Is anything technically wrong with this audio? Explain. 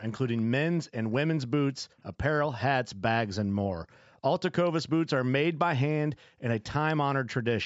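Yes. An echo leak appears twice, from 0.28 to 0.42 s and again from 1.97 to 2.03 s. Each time, a faint, brief copy of the speech returns 246 ms behind the original, at roughly 30 to 35 dB below it. This is likely a far-end echo canceller on a loudspeaker call that failed to fully remove what its microphone picked up, so a scrap of the voice slipped back into the line.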